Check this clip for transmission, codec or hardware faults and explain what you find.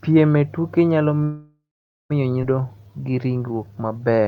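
Three transmission faults are audible in this speech clip: a stall, a forward jump, and a stretch of slowed playback.

From 1.23 to 2.12 s, right after "e tuke nyalo", there is a call audio freeze. The final sound before the stall is carried on as a decaying buzz or hiss, and about 480 ms of that fill is silence. The pattern points to packets being delayed in transit until the jitter buffer likely ran dry, with the receiver padding the gap. When the audio resumes it continues exactly where it stopped, so nothing is lost, but about 867 ms of extra delay has been inserted.

From 2.42 to 2.45 s there is a skip ahead. Playback jumps forward over roughly 0.7 s of speech with almost no audible seam, only a few milliseconds of fill joining the two sides. A stretch of audio was dropped, either in transit or by the overflowing jitter buffer, while later audio was already waiting, and the speech on either side of the jump runs together abruptly.

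From 2.61 to 4.24 s a jitter buffer slow-down is audible. Speech plays at about 85% of normal speed with the pitch unchanged, so syllables and pauses sound drawn out. This happens because the receiver repeated individual pitch periods and small fragments of pauses to rebuild its reserve, adding about 246 ms over this stretch.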